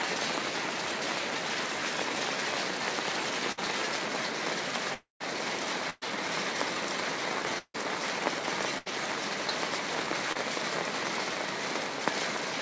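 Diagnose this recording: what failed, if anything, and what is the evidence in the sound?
The network failed, and the receiver's packet-loss concealment covered it. There are three bursts of packet loss: 3.52 to 3.67 s, 5.90 to 6.05 s, and 8.78 to 8.89 s. In each, the last sound is held and fades as a buzz or hiss. The fills last 54, 116 and 78 ms. Then the audio resumes further on, with about 60, 120 and 80 ms of material gone. Several consecutive packets were lost or arrived too late.

Two longer gaps sound like a long network dropout, likely a stretch where no packets arrived at all. At 4.94 to 5.22 s, the continued sound fades out. Near-silence then lasts about 140 ms, before the audio returns about 260 ms further along. At 7.58 to 7.76 s, the same pattern is shorter. There is about 50 ms of near-silence and roughly 160 ms is skipped. The concealment ran out and faded to nothing before the stream came back.

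At 10.32 to 10.37 s there is a short concealed packet loss. About 20 ms of the stream never reached the decoder in time. The receiver filled the hole with roughly 28 ms of extrapolated sound, then blended back into the real signal. It is heard as a brief smear or wobble rather than a gap. The call path itself carries nothing above 8 kHz, which fits a G.722 wideband codec at 64 kbps.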